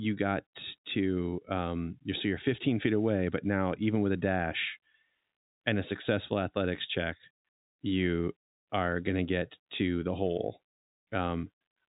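Listening closely to the speech, carried over ordinary telephone-band coding, nothing stood out as a technical problem.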